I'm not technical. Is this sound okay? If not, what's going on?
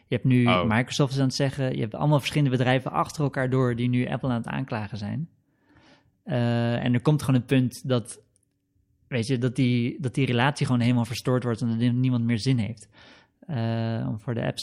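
Yes, nothing stood out as a problem when listening to this recording.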